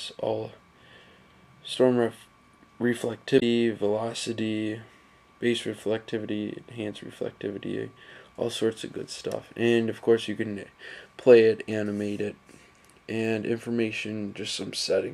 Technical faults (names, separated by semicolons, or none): damaged data in a compressed stream